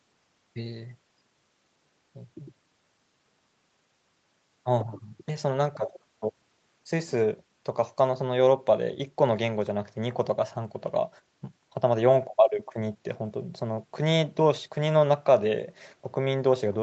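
No technical faults are audible in this speech recording. It has passed through a call path that leaves nothing above 8 kHz, a normal band limit for a call codec running at a wideband setting.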